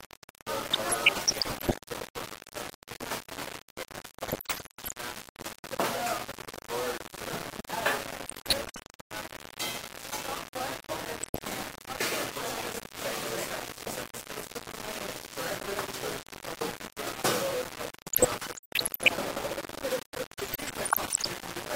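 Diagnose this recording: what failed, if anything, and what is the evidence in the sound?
Throughout, grainy distortion tracks the sound, with error only about 5 dB below it. Unlike steady hiss, it moves with the signal, so the likely cause is a sample-format conversion rounded to about 4 bits without dither.

DAB burbling, from the broadcast reception stage, appears at 0.73–1.74, 4.28–4.93, 8.24–8.79, 11.21–11.46, 18.13–19.13 and 20.38–21.27 s. Bit errors slip past error correction into MP2 sub-bands, so the sound burbles instead of cleanly dropping out like packet loss.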